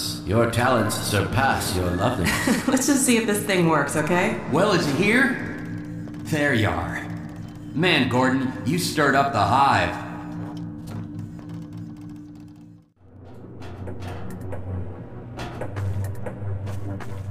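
Nothing in the audio stood out as a technical fault on listening.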